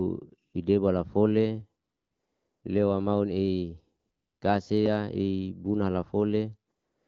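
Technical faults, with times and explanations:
0.49–0.53 s, 1.83–2.63 s, 3.99–4.41 s, 6.71–7.07 s: AMR comfort noise. During pauses the sender stopped transmitting speech frames, and the receiver filled each gap with smooth, steady synthetic noise in place of the real background, switching audibly in and out. The wideband codec around it sounds clean, consistent with a 12.65 kbit/s mode.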